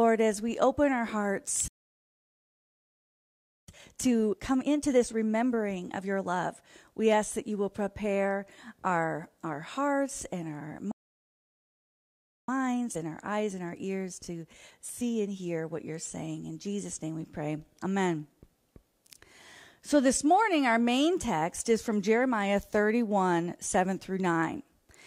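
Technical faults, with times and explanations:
1.68–3.68 s, playback stall: the sound cuts out mid-flow for a full 2 seconds, likely because the player ran dry of data or its thread got blocked.
3.68–6.68 s, time-compressed catch-up: the sound comes back rushed at about 1.25x speed with pitch unchanged, tiny pieces trimmed and cross-faded out.
10.91–12.48 s, playback stall: another dropout to silence, roughly 1.57 seconds this time, with the player likely starved of data or stuck until it recovers.
12.48–15.48 s, time-compressed catch-up: a gentler hurry at about 1.1x while the backlog drains, pitch steady.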